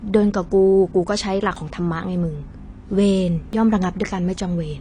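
From start to finish the speech has been squeezed through what is likely AAC compression at a low bitrate, with the damage plainly audible. The encoder has thrown away everything above about 10.2 kHz and coarsely quantised what remains, which fits a bitrate in the region of 32 kbps. The voice sounds dull and smeared, with a fizzy, warbling edge on sibilants and held sounds where the codec has starved or patched the spectrum.

At 1.56 s and again at 3.53 s there is audio missing between chunks, likely because the recording chain handles the sound in blocks of about 2 s and drops a short slice each time it closes one block and opens the next. Roughly 20 ms vanishes at each join and the two sides are butted together without a gap, so the speech jumps forward slightly, a brief skip that recurs about every 2 s.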